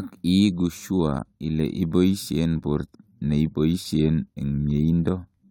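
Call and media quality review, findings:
Abrupt jump forward in the speech at 2.94 s, with a brief blip at the join. Likely a stream segment skipped. One segment of the segmented stream failed to load. The player carried on with the next one, so that stretch of programme is absent. Check segment fetch and retry handling.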